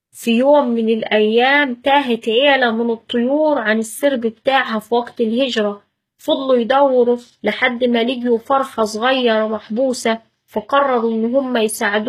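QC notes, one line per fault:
throughout, HE-AAC compression: s sounds come out gritty and metallic, and the treble is synthetic, with nothing above 14.9 kHz. This is likely HE-AAC rebuilding the upper band from copied lower bands, which fits a bitrate around 20 kbps.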